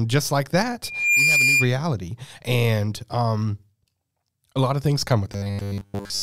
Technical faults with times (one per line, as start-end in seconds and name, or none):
0.83-1.74 loudspeaker feedback squeal
5.33-6.22 robotic sound from repeated short buffers